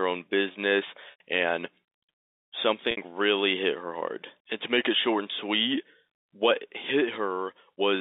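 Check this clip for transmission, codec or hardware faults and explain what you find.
Two short dropouts stand out in this speech, carried over a G.711 telephone line limited to roughly 250 Hz to 3.7 kHz. Both are packet loss with pitch repetition. At 1.11 to 1.20 s, just after "own business", and at 2.91 to 2.97 s, just before "really hit her hard", the sound briefly freezes into a held, buzzy tone. The receiver filled each gap, 90 ms and then 60 ms, by repeating the last pitch period, which fits three and then two lost 30 ms packets.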